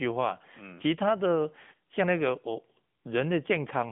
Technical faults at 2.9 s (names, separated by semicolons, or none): AMR narrowband mobile codec